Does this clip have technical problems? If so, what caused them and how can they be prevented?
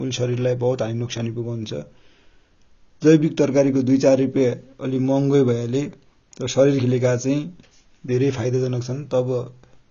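Yes. Throughout, low-bitrate AAC compression likely stripped everything above 10.3 kHz, leaving the speech dull, smeared and warbly on sustained sounds. Prevent it by encoding at a higher bitrate.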